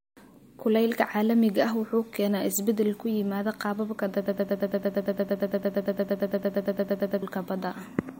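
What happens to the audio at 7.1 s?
At 7.1 s the sound is stuck in a broken-record loop: a 114 ms fragment, caught after "isbeddel ku yimaada qaababka", repeats back to back from 4.26 to 7.22 s. This is likely a stalled player or stream resending its last buffer, so the audio that belonged there is lost.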